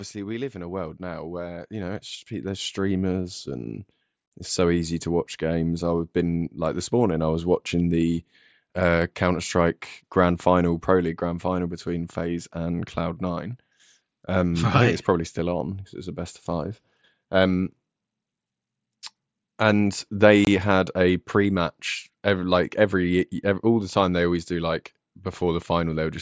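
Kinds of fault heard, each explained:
Automatic gain rising: From 0.52 s to 6.89 s the speech and the background behind it swell together, slowly climbing by about 13 dB rather than jumping. The automatic gain control judged the incoming level too low at the start and kept raising its gain over these six seconds. The slow ramp lifts everything, noise included, so the room grows along with the speech.
Unconcealed Bluetooth headset packet loss: Around 20.45 to 20.47 s a brief hole of about 22.5 ms cuts into the speech, with sharp edges. Voice packets travelling from the headset to the phone were lost, which fits about three missing packets. Because nothing was filled in to smooth over the gap, silence or an idle pattern replaced the missing sound on this wideband link.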